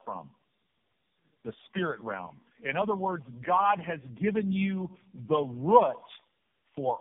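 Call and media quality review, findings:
Tandem speech coding, whole clip: rough, muffled, warbly speech, band-limited to 3.5 kHz. Sounds like repeated decode/re-encode at network borders, fitting three AMR-NB passes near 7 kbit/s. Compounded warble and roughness exceed what a single low-rate codec pass produces.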